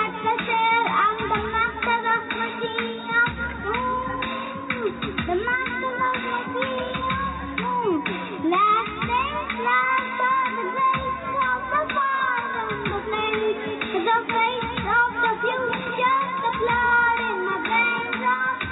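Nothing stood out as a technical fault on listening.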